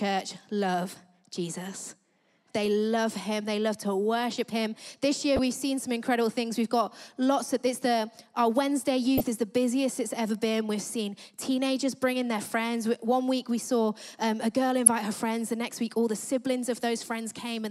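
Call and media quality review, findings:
Blips at 2.66 s, 5.36–5.39 s, 9.18–9.21 s and 14.86 s, rising from faint to near full scale. Decoder: corrupt frame decoded, bit-flipped frames misplacing spectral energy.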